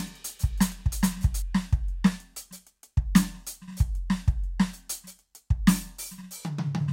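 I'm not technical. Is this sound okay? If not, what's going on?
No. A doubled audio track runs from the start until 1.42 s: an equally loud copy trails about 0.4 seconds behind, likely captured twice.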